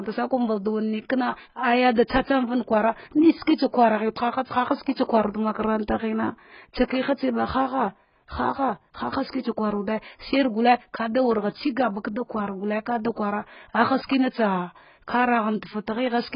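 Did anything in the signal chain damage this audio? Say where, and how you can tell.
Yes. The damage sits at the codec stage, throughout the speech. Nothing is present above about 5.1 kHz, so the top end is gone and the sound is dull. Sibilants smear into a fizzy, warbling texture, and sustained sounds shimmer. The cause is likely heavy AAC compression, AAC-LC at a very low bitrate, which fits about 12 kbps. Starved of bits, the encoder lowers its cut-off and coarsely quantises each frame's frequency lines, leaving holes in the spectrum.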